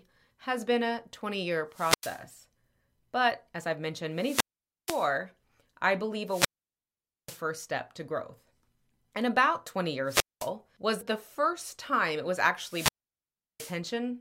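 Wireless microphone squelch dropouts occur at 1.71, 4.15, 6.26, 10.06 and 12.64 s. Each time, the fading radio signal lets hiss rise as a broadband smear on the spectrogram. The receiver then mutes, leaving a flat-lined gap in the waveform of 0.09 to 0.84 s.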